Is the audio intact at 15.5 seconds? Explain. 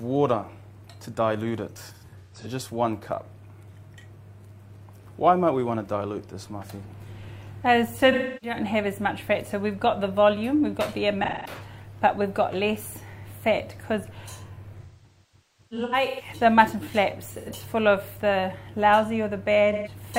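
No. AAC frame loss with concealment spans 14.81 to 16.29 s. The decoder rebuilds missing frames from the last good spectrum, so gaps of up to roughly 200 ms sound smeared, noisy or phasey.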